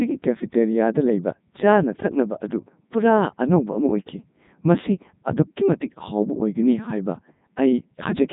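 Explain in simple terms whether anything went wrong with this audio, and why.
Codec 2 vocoder damage runs through the whole clip. Rather than storing the actual sound wave, it rebuilds the speech from simple tones, so it comes out robotic and buzzy with nothing above 3.8 kHz, unlike a plain muffled phone line.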